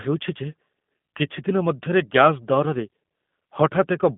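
It's a short speech clip that sounds like G.729 throughout. Everything sits in a narrow telephone band of roughly 150 Hz to 3.5 kHz, and the slightly rough, synthetic texture points to an 8 kbit/s G.729A coder rebuilding speech from a vocal-tract model and sparse pulses.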